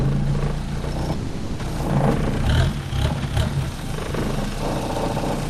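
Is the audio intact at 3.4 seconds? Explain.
Yes, at 3.4 s the sound is intact, with no dropout, click or other fault audible at that point.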